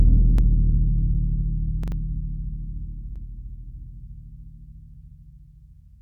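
Short stutters break into the music at 0.38 s, 1.84 s and 3.16 s. Each time, a roughly 43 ms slice repeats with a hard join: once, then three times, then once again. This is a repeated buffer. Fresh audio arrived late, so the device replayed its last block, a length that fits a 2048-sample buffer.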